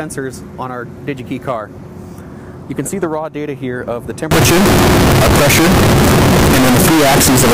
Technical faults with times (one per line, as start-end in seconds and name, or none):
4.31-7.54 float read as integer